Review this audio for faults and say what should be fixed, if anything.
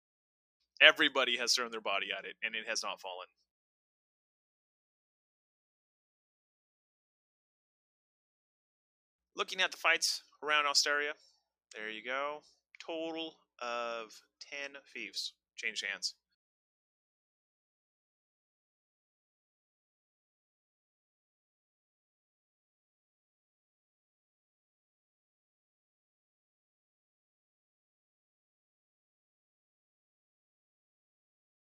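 No faults found; nothing to fix.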